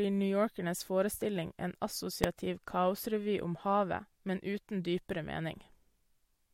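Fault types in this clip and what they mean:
Invalid numbers at full scale: at 2.24 s, a calculation spat out infinite or invalid values that got pinned to the maximum level for a block of just 0.73 ms, which fits a 32-sample block. It's so short that you hear it as a single sharp bang in the speech.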